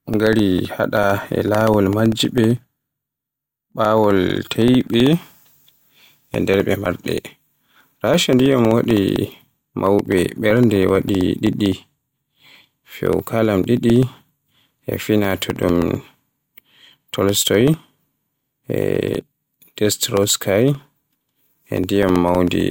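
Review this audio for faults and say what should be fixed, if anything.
Periodic USB or driver dropouts run from 0.07 s to 22.6 s: every 64 ms, roughly a millisecond of the speech drops to silence, giving hundreds of evenly spaced ticks audible only under signal, as a recurring task stalls the USB bus or audio driver. Remove or reschedule that background task, or give the audio driver higher priority and more buffering.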